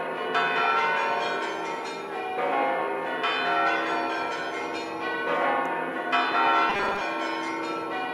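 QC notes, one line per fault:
6.70 to 7.01 s, robotic sound from repeated short buffers: for about a third of a second the sound turns into a rigid, metallic buzz fixed at 200 Hz that still loosely tracks the original's contour. The likely cause is audio arriving too seldom, so playback loops the last 5 ms chunk, with roughly half the material replaced by repeats. Unlike a stutter or dropout, there is no audible gap or echo, just a steady imposed pitch.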